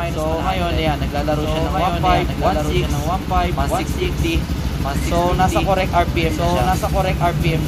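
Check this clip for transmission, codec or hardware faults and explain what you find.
There's one fault here, and it runs the whole way through: a doubled audio track. A second, full-band copy trails the original by about one and a half seconds at roughly equal level, with no decay or room colour. Likely cause: the signal getting picked up twice, once through a slower path.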